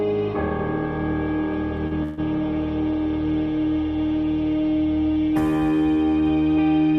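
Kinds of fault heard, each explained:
Short stall from a late packet: At 1.87 to 1.93 s the sound is held for about 39 ms instead of moving on, with a faint buzz or dip where the next piece of audio should have started. A packet arrived after its playout time, the jitter buffer emptied, and the receiver extended the last sound to cover the wait. Playback then resumes from the same point, so nothing is lost, but everything after it runs 39 ms later.
Call audio freeze: From 2.03 to 2.20 s the audio stalls again, this time for about 145 ms. The gap is filled with a continued, fading buzz or hiss rather than dropping to silence. This is likely a run of packets held up in transit that drained the jitter buffer, with the receiver synthesising the continuation until they arrived. The audio picks up where it stopped with nothing missing, adding a further 145 ms of delay.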